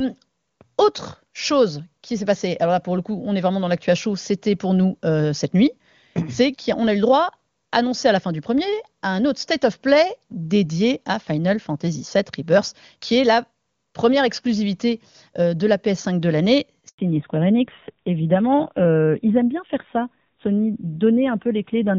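Right after "de l'année", at 16.89 s, there's a handover gap: the call hopped networks and no speech frames came through for about 100 ms, so the sound drops out abruptly and sits silent until 16.99 s, losing whatever fell in that slice.

From 16.99 s to the end, you get a fallback to narrowband. The call leaves the clean wideband sound of the earlier AMR-WB stretch, which fits its top 23.85 kbit/s mode, for an older narrowband codec, probably AMR-NB around 7.4 kbit/s. Nothing above 4 kHz survives, so the voice turns dull, boxy and a bit rough.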